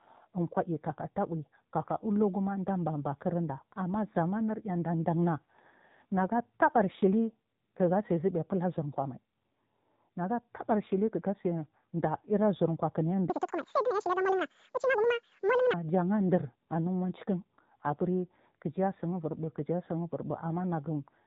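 Throughout, the speech carries the AMR narrowband mobile codec sound: nothing above about 4 kHz survives, and the voice has the buzzy, synthetic edge of a low-rate vocal-tract model, consistent with AMR-NB at around 7.4 kbps, where too few pulses describe each subframe.

From 13.30 to 15.74 s, a section at the wrong speed plays twice as fast as the surrounding audio, its pitch raised by roughly ten semitones and the speech hurried and squeaky. The likely cause is that the segment was played out against the wrong clock.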